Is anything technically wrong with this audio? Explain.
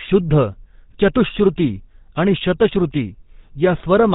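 Yes. The speech has passed through a GSM full-rate codec, and the damage is plainly audible for the whole clip. This codec models the vocal tract and drives the model with regularly spaced pulses, keeping only every third sample of the excitation, consistent with a 13 kbps rate. Nothing above 4 kHz survives, so the speech sounds band-limited and dull, with a buzzy, gravelly roughness that comes from the coarse pulse excitation.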